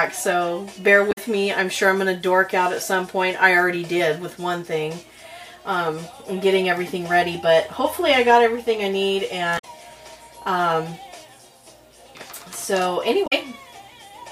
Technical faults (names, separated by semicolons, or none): damaged data in a compressed stream